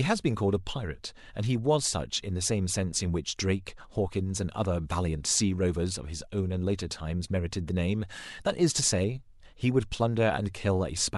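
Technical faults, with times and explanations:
No technical faults can be heard in this speech recording. Nothing in it calls for a time or an explanation.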